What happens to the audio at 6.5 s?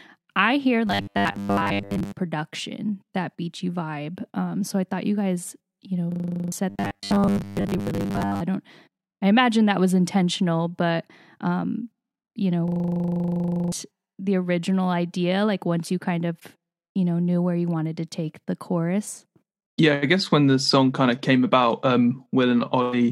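A rapid, rattling buzz at 25 Hz replaces the speech from 6.12 to 6.52 s, as one 40 ms fragment repeats ten times. This is a system hang loop: the system froze while the audio hardware kept replaying its ring buffer, losing about 0.4 s of speech.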